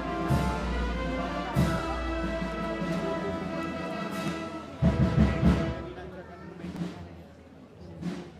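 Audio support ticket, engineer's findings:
Small skips at 1.79, 4.28 and 6.76 s, evenly spaced about 2.5 s apart, each losing a tiny slice of around 15 ms, joined without any gap. Audio missing between chunks, likely the recorder dropping samples each time it rolls over to a new 2.5 s chunk.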